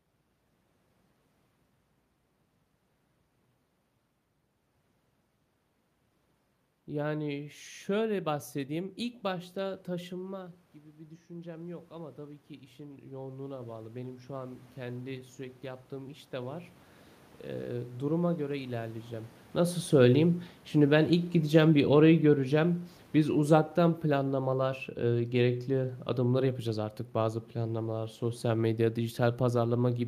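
From 8.99 s to 19.39 s, the automatic gain control rises. After the voice drops by about 14 dB around 10 s, as the talker moves back, the gain climbs by about 16 dB. Voice and room noise swell together, ending slightly louder than before.

From 19.86 s to 26.51 s, the automatic gain control falls. The talker moves around 19 s while the gain is still high. The gain then eases down by about 8 dB, and the voice and its background sink together.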